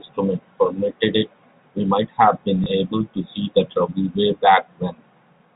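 At 2.64 s one network packet failed to arrive, and the receiver filled the 20 ms gap by replaying the packet before it. Because the loss is a single packet, this packet loss with last packet repeated comes across as a small blip rather than a sustained buzz, set within the narrow telephone band, nothing above 4 kHz, of the G.711 coding.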